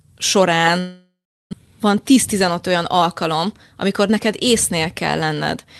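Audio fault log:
0.79–1.55 s, long network dropout: The speech breaks off into a buzzy continuation of the last sound that fades over about 0.73 s. It then settles into roughly 0.36 s of silence before speech resumes at 1.55 s with a piece missing. This is likely a stretch where no packets arrived. The receiver concealed the gap by extending the final sound, then gave up and went quiet. About 0.4 s of the original speech was never played.
1.66–5.65 s, jitter buffer speed-up: For about four seconds the speech sounds rushed and runs roughly 5% fast, yet the pitch stays where it was. After the gap, which shifted the delay by around 0.3 s, delayed packets arrived together and left the jitter buffer holding more audio than it aims for. To work that delay back down, the receiver repeatedly cut out short pieces one or a few pitch periods long, about 0.2 s in total. That shortens the timing without shifting the pitch, and the Opus call path limits the band to 12 kHz throughout.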